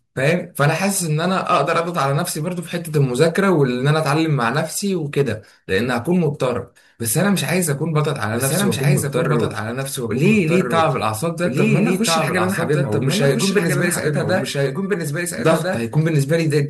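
From 8.34 s to the end, a second full-band copy of the speech runs about one and a half seconds behind, roughly 5 dB quieter, entering abruptly and dry. This doubled audio track likely comes from the signal being captured again through a slower path.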